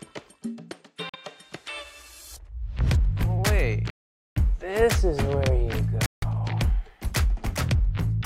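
Interference likely delayed Bluetooth packets three times, letting the headphones' buffer run empty and producing a Bluetooth stall each time. The audio cuts to silence at 1.09 to 1.16 s (44 ms), 3.90 to 4.38 s (464 ms) and 6.06 to 6.24 s (163 ms), then resumes once the resent data arrives.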